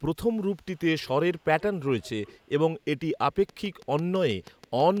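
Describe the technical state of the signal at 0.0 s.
At 0.0 s the speech signal is intact, with no audible fault at that moment.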